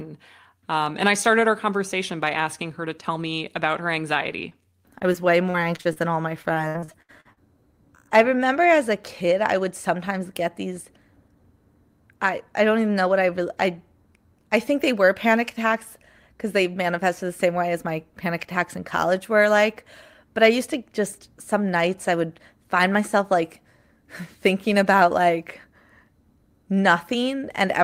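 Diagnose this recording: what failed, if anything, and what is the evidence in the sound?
The network path dropped audio briefly at 4.49 to 4.53 s, and the receiving decoder concealed it. This is short concealed packet loss: about 20 ms of signal failed to arrive in time, and the decoder bridged the gap by extending the preceding sound, following its pitch if voiced or using shaped noise if not, before crossfading back to real audio. The result is a momentary smear or wobble in the speech rather than an outright silence.

Two stretches show repeated packet loss (robotic sound), also on the network side. The first runs from 4.99 to 5.98 s, ending just before "than all my", with six separate dropouts, the longest 39 ms, and concealment covering about 17% of that span. The second, from 6.42 to 7.38 s, starts right after "than all my" and is worse: nine dropouts, the longest 66 ms, with about a third of the span synthesised. 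Back-to-back concealment produces choppy speech with pieces missing.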